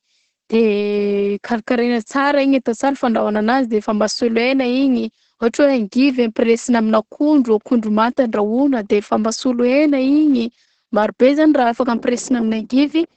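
Throughout the speech, Opus voice compression is audible. Nothing above 8.8 kHz survives, and the coarsely coded linear-prediction excitation leaves the voice muffled, hoarse and slightly robotic. The heavy damage points to wideband SILK mode at around 10 kbps, with 20 ms frames.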